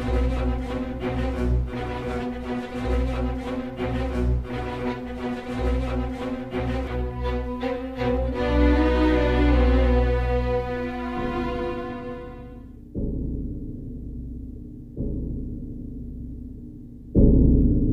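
Nothing in the audio stood out as a technical problem on listening.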